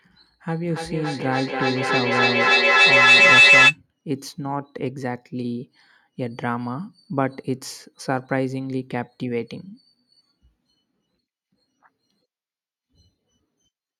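From 0.54 s to 3.8 s there is feedback howl. Two devices share a room and a call, and the loop gains level each trip. A piercing tone near 3 kHz builds to about 12 dB above the speech. The loop repeats roughly every third of a second.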